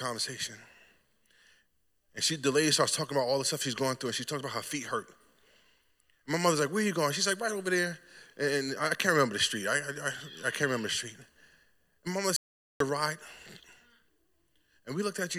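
An audio dropout to silence hits this speech clip from 12.36 to 12.80 s: roughly 0.44 s falls to silence with no room tone, likely from a lost input while recording continued.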